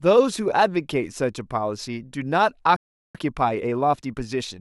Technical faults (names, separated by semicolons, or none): playback stall; time-compressed catch-up